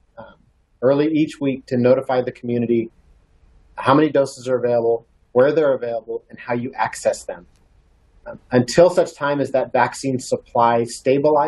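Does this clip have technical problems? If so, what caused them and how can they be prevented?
No, nothing in this clip stood out as a technical problem on listening.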